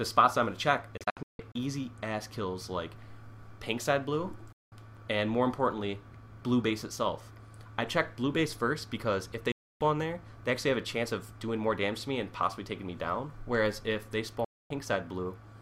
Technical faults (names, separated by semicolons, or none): digital broadcast dropout